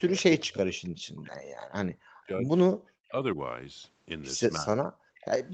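From 0.08 to 0.78 s the speech sinks by something like 35 dB, and from 0.98 to 2.51 s it drops even deeper, around 40 dB, with shallower dips of about 10 dB at 3.1 and from 4.59 to 4.77 s. These are most likely speech suppressed in double talk: with both ends talking at once, the echo canceller could not tell the near talker from loudspeaker echo and pulled the whole signal down. Unlike the gating near the end, it is the talker's own sound that dips.

Between these, at 0.84 to 0.89 s, a faint scrap appears, and again from 5.16 to 5.26 s, slightly louder. Both are a copy of the speech arriving 318 ms late, sitting about 35 dB and then about 30 dB below the direct sound. This is likely an echo leak, where the far-end canceller let part of what its microphone caught from the loudspeaker pass back. What sets it apart is an added delayed copy rather than any loss.

From 4.98 to 5.16 s the room sound itself falls away by about 40 dB for roughly a fifth of a second, then returns just as the echo scrap begins. 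This is background gated by the echo canceller: the canceller clamped the microphone while the loudspeaker played. The ambience vanishes here, whereas in double talk suppression the speech is what drops.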